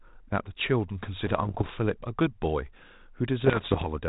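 Bit errors on an ADPCM link hit this speech clip from 1.24 to 1.71 s and again from 3.40 to 3.87 s, the second burst rougher, with an error rate of roughly one to two percent against under one percent in the first. Each flipped bit knocks the decoder's step size and predictor off track, so the error rings on as pops, gritty bursts and brief level jumps. The telephone-band sound points to G.726 ADPCM at 32 kbit/s.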